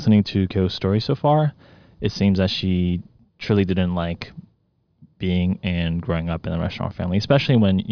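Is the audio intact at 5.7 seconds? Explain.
Yes, at 5.7 seconds the speech plays through cleanly with no audible fault.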